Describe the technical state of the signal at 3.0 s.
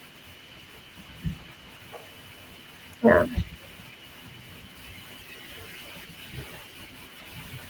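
At 3.0 s the signal is intact, with no fault audible at that moment, and the Opus voice compression passing the full band through with only light coding damage.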